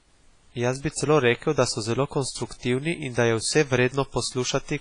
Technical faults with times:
0.00-4.80 WMA compression

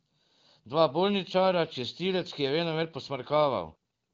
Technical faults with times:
none

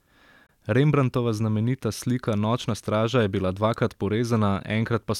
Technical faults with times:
0.46-0.50 Bluetooth dropout

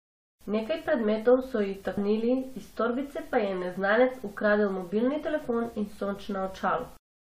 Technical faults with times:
1.96 damaged data in a compressed stream

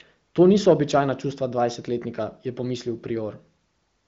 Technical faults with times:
none

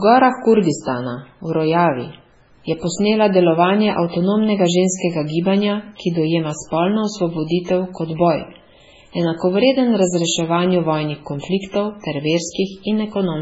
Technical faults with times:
0.00-13.41 MP3 compression

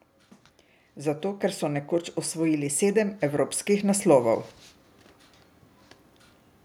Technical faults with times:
1.02-4.50 automatic gain rising

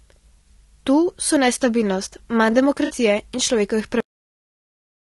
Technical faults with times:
0.00-5.06 low-delay AAC compression
2.85-2.92 AAC frame loss with concealment
4.00-5.06 cut-off end

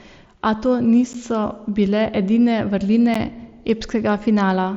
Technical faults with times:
1.13 gap between chunks
3.14 gap between chunks

